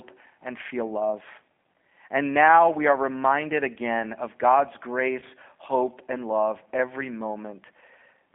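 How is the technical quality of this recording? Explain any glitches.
The technical quality is limited by a low-bitrate telephone codec throughout and one brief dropout.

Throughout, the speech has passed through a G.729 codec. The encoder models each short frame with a vocal tract filter, a pitch predictor and a handful of pulses, which fits an 8 kbit/s rate. The line passes only about 250 Hz to 3.5 kHz, so the sound is thin and muffled. The coding damage is plainly audible as a rough, slightly synthetic buzz on the speech.

At 5.20 to 5.24 s there is VoIP packet loss concealed by the speech codec. About 20 ms of audio failed to arrive, which fits two lost 10 ms frames. The decoder filled the gap by repeating its last pitch and filter settings at falling gain. This is heard as a short smeared patch of buzzy tone or coloured noise. Because each frame builds on the previous one, the speech stays weak or distorted for a moment after the gap.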